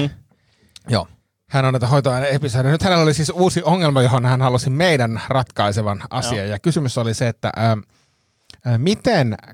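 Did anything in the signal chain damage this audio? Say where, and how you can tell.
No, nothing audible in this speech recording points to damage at any stage of the signal chain.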